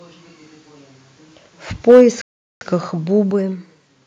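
From 1.89 to 2.02 s the speech shows microphone overload: peaks run about 4 dB past the converter's limit, so roughly a fifth of the samples are flattened. The likely cause is input volume set too high. It sounds like a harsh crackle, and the waveform shows squared-off tops with broadband smearing on the spectrogram.

At 1.91 s, inside that distorted stretch, the microphone volume stepped down by about 2 dB, likely an automatic gain reduction reacting to the clipping. Voice and background drop together, visible as a sudden step in the waveform envelope. A second, larger step of about 5 dB follows at 3.31 s.

A playback stall runs from 2.21 to 2.61 s. The sound cuts out for about 0.4 s, likely because the player ran dry of buffered data, and then resumes. The waveform shows a flat line, and the spectrogram shows an empty vertical band.

From 3.07 to 3.87 s a drift correction step raises speed by 5.4% and pitch by 91 cents, close to a semitone, likely a clock-matching rate change. 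The voice turns audibly sharp and hurried, then snaps back, and the spectrogram's harmonics shift upward for that span.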